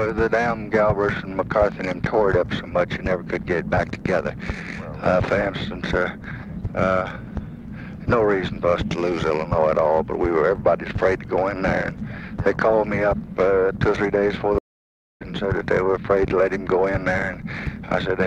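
At 14.58 s the connection dropped and the player performed a stream reconnect, restarting its decoder mid-stream. The sound cuts out for about 0.62 s, until 15.23 s, then resumes roughly 0.4 s further on, so that stretch of audio is simply skipped.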